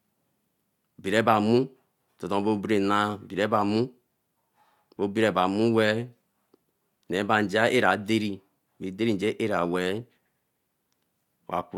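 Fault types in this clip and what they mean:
Nothing in the speech stood out as a technical problem on listening.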